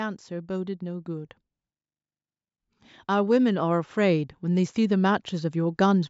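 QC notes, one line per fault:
3.07–6.05 s, automatic gain rising: from 3.07 s the level climbs steadily until near the end of the clip, about 6 dB louder by 6.05 s, with the speech and the background noise swelling together rather than the talker getting louder. The call's gain control judged the incoming level too low and raised its gain gradually over these three seconds, so everything it passes is lifted at once.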